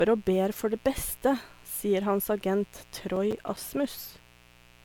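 A steady, raspy buzz sits under the speech from start to finish, about 30 dB below it. This is mains buzz at 60 Hz: sharp switching spikes, twice per mains cycle, leak into the signal and spread harmonics up into the kilohertz range.

Throughout, the speech also sounds swirly, smeared and hollow, with blurred attacks and nothing above 19.9 kHz. This points to generation loss, likely from several passes through MP3 at around 128 kbit/s. Each re-encode quantises on a new frame grid, piling up noise and spectral holes.

From 3.16 to 3.74 s, a burst of gritty crackle tears across the sound and then stops. This is processor overload crackle: a run of roughly ten missed buffer deadlines, consistent with buffers of about 5 ms, each leaving a tiny hard-edged gap of silence.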